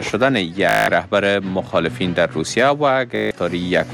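At 0.69 s a rapid machine-gun buzz takes over for about 0.19 s, until 0.88 s, and the same stutter returns from 3.16 s to 3.31 s, about 0.15 s. Both are Bluetooth stutter. Audio data arrived late or not at all, so the receiver replayed its last short slice over and over, and a gap of that length fits roughly ten and eight lost packets. After each gap, the sound resumes further along.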